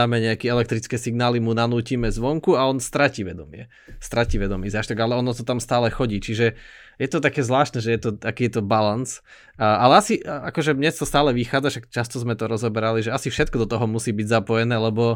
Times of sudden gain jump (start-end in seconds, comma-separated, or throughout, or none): none